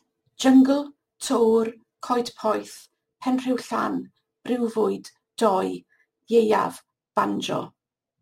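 Speech with crude rate conversion throughout: samples dropped without filtering, fitting a 48 kHz to 44.1 kHz change, add a gritty, inharmonic fizz roughly 30 dB below the voice.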